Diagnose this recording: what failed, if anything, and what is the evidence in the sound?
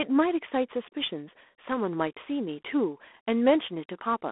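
G.726 ADPCM coding damage runs through the whole speech clip, a fault at the codec stage. The speech carries a harsh, rasping hiss that rises and falls with its level, and the coarseness is plainly audible, which fits the 24 kbit/s rate of 3 bits per sample. Each sample is sent only as a rough difference from an adaptive prediction, so the error rides on the signal. The band is telephone-narrow, about 250 Hz to 3.5 kHz, with nothing above 3.8 kHz.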